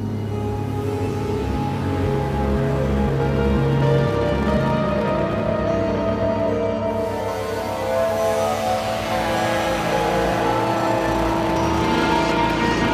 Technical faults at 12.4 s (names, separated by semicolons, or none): none